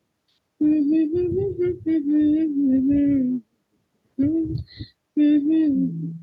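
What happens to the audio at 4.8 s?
Nothing goes wrong at 4.8 s: the speech carries on intact through that moment, with no audible fault.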